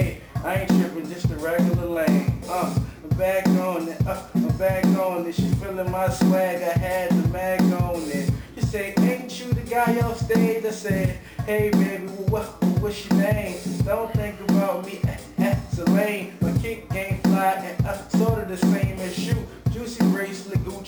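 Imaging from sample-and-hold upsampling runs through the whole clip. The sound was raised to a higher rate by repeating each sample, with no smoothing filter afterward. The result points to a doubling from 24 kHz to 48 kHz. The unsmoothed steps leave a mirrored copy of the spectrum between 12 kHz and 24 kHz, at about 28 dB below the signal. It is heard as a thin, bright metallic fizz on top. The fizz rises and falls with the sound's level.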